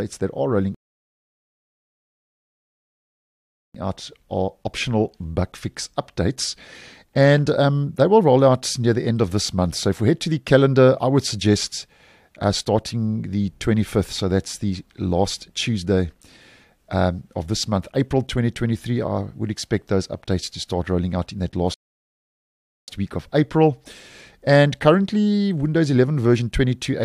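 The player's buffer ran dry twice, causing rebuffering stalls: the audio drops to silence from 0.75 to 3.75 s and from 21.74 to 22.88 s, then resumes exactly where it stopped. Nothing is skipped, but the pauses add 3.0 s and 1.14 s.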